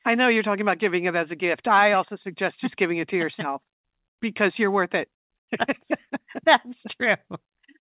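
No technical faults are audible.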